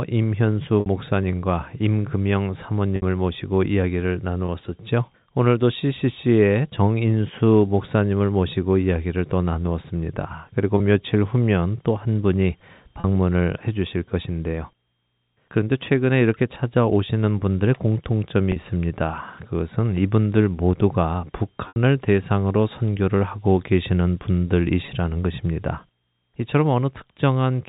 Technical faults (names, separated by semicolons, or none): packet loss with pitch repetition